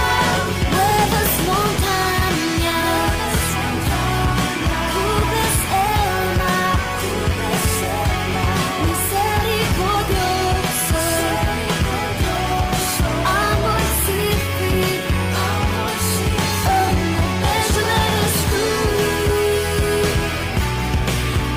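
No technical fault can be heard anywhere in the clip. Nothing in the sound points to a break, a glitch or a change in the signal.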